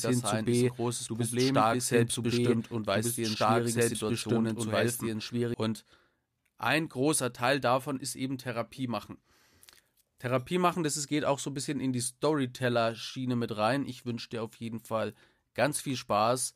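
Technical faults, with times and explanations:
0.0–5.54 s, doubled audio track. The speech is already doubled when the clip begins. A second full-band copy runs about two seconds behind the first, at roughly the same loudness. It has no decay or room colour, so it sounds like a separate, overlapping track rather than an echo. At 5.54 s the copy stops abruptly. The likely cause is the audio being captured twice, once through a slower path, or an edit leaving two out-of-step copies.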